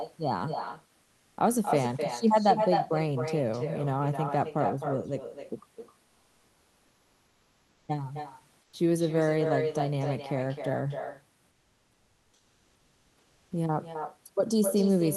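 Throughout the speech, the far end plays the call over a loudspeaker with no echo canceller, so its microphone returns the talker's voice after roughly a third of a second, about 6 dB below the original, as a thinner shadow trailing every phrase.

From 6.03 to 7.87 s, 8.63 to 8.73 s and 11.51 to 13.51 s, the sender has likely stopped transmitting during pauses, and comfort noise replaces the background. The real room noise, about 40 dB below the speech, gives way to steady, featureless hiss about 2 dB, 6 dB and 3 dB quieter respectively.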